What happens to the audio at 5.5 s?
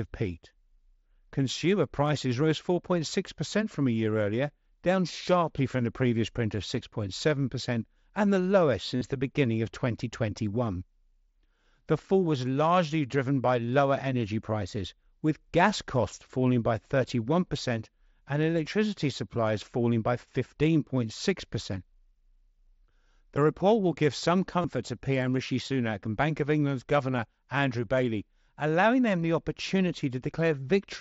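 Nothing goes wrong at 5.5 s: the speech runs on intact through the Bluetooth mSBC headset codec, with no dropout, click or other fault at that moment.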